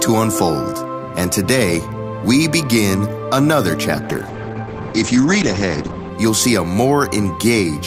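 From 3.97 s to 6.17 s a call bitrate drop occurs: the bandwidth estimate collapses, forcing the encoder from what sounds like 64 kbps down to about 10 kbps. Everything above 8 kHz disappears, and the sound stays rough and muffled for roughly 2 s.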